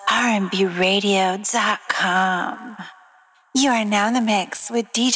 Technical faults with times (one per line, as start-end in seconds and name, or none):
2.54-5.16 resampler restarted on every block